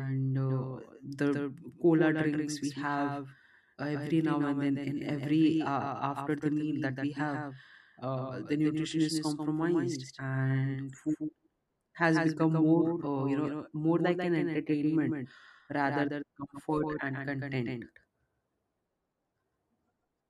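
Speech with a doubled audio track throughout: a second full-band copy trails around 150 ms behind, roughly 5 dB quieter, likely from a slower capture path. On a waveform, every burst has a smaller identical twin at that offset, and a spectrogram shows each pattern repeated.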